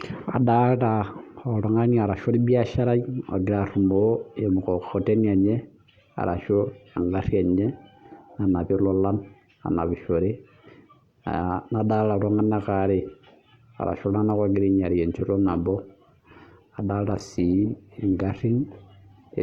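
Adaptive stream at a lower bitrate from 15.46 s to the end: the connection slowed, so the speech abruptly shows more codec artefacts without any gap, consistent with a drop to roughly 16 kbit/s.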